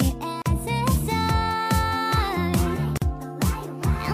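At 0.42 s and again at 2.97 s the sound drops out for about 39 ms and then 44 ms: a gap at a join of encoded pieces. Each segment was encoded on its own, and the leading delay and final-frame padding were left in when they were butted together. Both gaps are heard as a brief hole before the sound resumes where it left off. On a waveform each is a flat stretch with slightly smeared edges. A spectrogram shows a thin vertical blank band.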